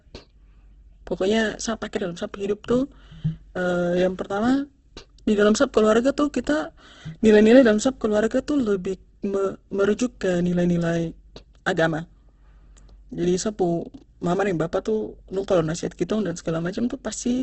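Throughout, the speech sounds rough and grainy, cut off above 8.1 kHz. A spectrogram shows a flat ceiling over noisy bands, likely from Opus compression at a low bitrate.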